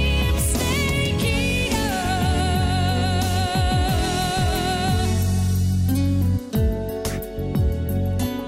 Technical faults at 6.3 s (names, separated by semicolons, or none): none